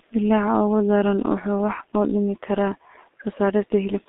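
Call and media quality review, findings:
Muffled, hoarse speech with smeared consonants, whole clip; nothing above 3.7 kHz or below 250 Hz. G.723.1 codec, heavy damage, fits 6.3 kbit/s mode: coarse 30 ms frames, slow voice-model updates.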